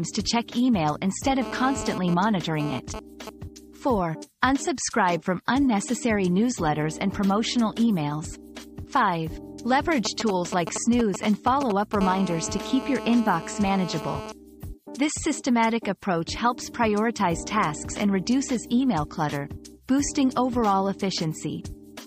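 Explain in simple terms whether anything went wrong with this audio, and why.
A nearby 2G mobile phone's radio pulses were picked up and rectified by the audio circuitry, causing GSM phone buzz. This is a harsh, raspy 217 Hz buzz. From 1.42 to 3.30 s it comes and goes while the phone transfers data, and from 12.01 to 14.32 s it holds steady during a call.

Just before that, from 10.05 to 11.95 s, the phone sent only short groups of signalling pulses, heard as GSM signalling bursts: a galloping dit-dit-dit of short buzzes.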